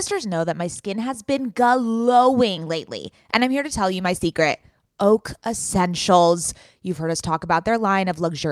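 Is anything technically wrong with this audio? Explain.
Yes, there's a call bitrate drop from 3.89 to 5.93 s. The speech gets rougher and watery, stays that way for about 2 s, then cleans back up. What's happening is the call's bandwidth estimate dipped, so the encoder was told to spend far fewer bits and started coding everything more coarsely. The degradation fits a fall from around 64 kbps to roughly 26 kbps before it recovers.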